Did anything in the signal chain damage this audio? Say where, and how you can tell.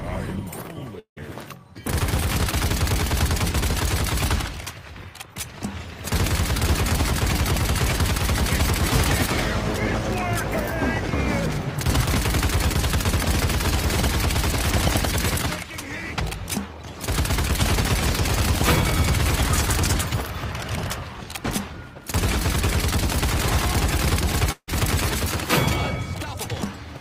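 Yes. At 0.99–1.20 s and 24.52–24.69 s, the sound smears into a fading buzz, falls silent, then resumes with about 180 ms and 160 ms lost. This is likely a long network dropout: packets stopped arriving, and concealment stretched the last audio until it ran out.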